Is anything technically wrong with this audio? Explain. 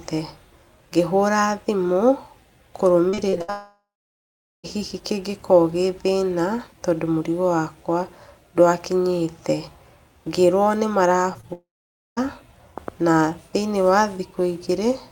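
Yes. The speech has network faults. From 3.09 to 3.5 s, repeated packet loss gives a choppy, robotic sound. Five gaps, up to 63 ms each, are patched by extending earlier sound, and about 41% of that stretch is filled in this way.

A long network dropout follows, from 3.5 to 4.66 s. The sound briefly continues, then goes silent for about 0.8 s. This is likely from audio that never arrived. Speech resumes at "hihi kĩngĩkorwo gĩ thĩna".

Just after "ngĩrwo nĩ", short concealed packet loss occurs at 11.34 to 11.37 s and 11.41 to 11.45 s. Each hole is bridged from the preceding sound, leaving a brief smear or wobble.

A second long network dropout runs from 11.53 to 12.19 s. After a short fading tail, about 0.5 s of silence remains. It likely comes from lost packets, and the missing audio is skipped.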